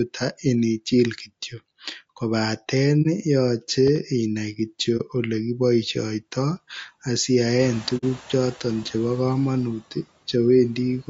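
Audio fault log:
Throughout: low-delay AAC compression. The speech sounds rough and grainy, with noise filling the gaps between harmonics and a thin, synthetic top band. This is likely AAC-ELD at a low bitrate, around 32 kbps, whose short frames resolve pitch harmonics poorly.
3.02–3.07 s, 4.97–5.01 s, 7.97–8.04 s: AAC frame loss with muting. There are brief dips between "inichil kityok kobaten" and "yoche inai" and just after "kityok kobaten yoche inai", and a soft-edged hole at 7.97 s. The first two fit one lost 30 ms frame each, and the third fits two frames (60 ms). The decoder zeroed the missing spectrum, and the overlapping windows fade the sound out and back in.
3.87–3.98 s: loud pop. Two sharp pops come in quick succession just after "inichil kityok kobaten yoche", peaking somewhat above the speech level, and the speech carries on underneath. This is likely a sudden voltage pulse, for example from a switch, static or a driver glitch, shaped by the downstream circuitry.
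7.6–8.21 s: noise suppressor catching up. Room noise jumps by about 19 dB near 7.5 s. It first comes through with little reduction and then sinks by about 5 dB over 610 ms as the suppressor's noise estimate adapts to the new level.
9.8–10.06 s: speech cut by the noise suppressor. The suppressor mistook parts of the speech for noise and turned them down with the background, by up to about 11 dB and over roughly 100 ms in total. Those parts sound swallowed and faint.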